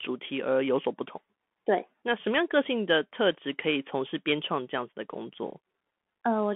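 From start to finish the speech carries the Bluetooth CVSD headset codec sound: a narrow 200 Hz to 3.4 kHz band, a grainy hiss underneath, and scratchy s sounds where the one-bit up/down steps can't keep pace, which fits a 64 kbit/s CVSD stream.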